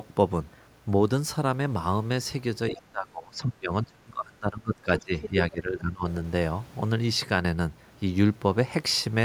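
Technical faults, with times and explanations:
2.71–6.05 s, speech suppressed in double talk: the speech repeatedly sinks, by around 25 dB at its deepest, for roughly 3 s in total, likely because an echo canceller mistook overlapping talk for echo and attenuated everything. The waveform shows collapsed envelope stretches, and the spectrogram shows faded, gappy energy.
5.22–5.29 s, other side's voice leaking through: a brief second voice surfaces some 10 dB below the speech, likely loudspeaker sound the echo canceller failed to remove. On a spectrogram it appears as a faint, separate harmonic trace overlapping the main speech.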